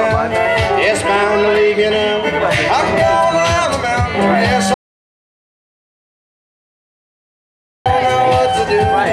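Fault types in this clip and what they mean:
audio dropout to silence: the input was likely lost and silence was written, so the sound cuts to total silence from 4.74 to 7.86 s, about 3.1 s gone.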